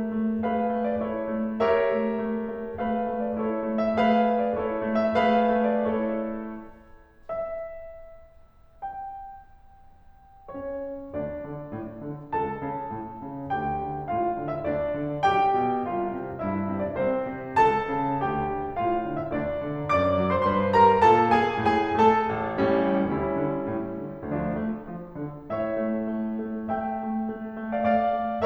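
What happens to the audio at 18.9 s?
Nothing goes wrong at 18.9 s; the music plays through that moment intact, with no dropout, click or other fault.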